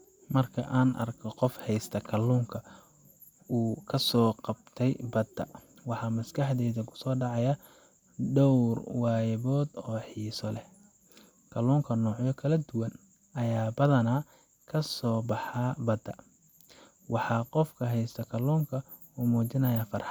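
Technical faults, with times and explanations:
No technical faults, with times and explanations, are present in this clip.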